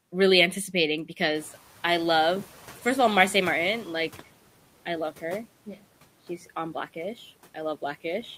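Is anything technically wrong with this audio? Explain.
Yes. Just after "really anticipating", at 1.35 s, the room noise jumps by about 12 dB. The noise suppressor is catching up, and its noise estimate lags. The background noise leaks through with less reduction at first, then sinks about 9 dB over 2.84 s, settling by 4.19 s.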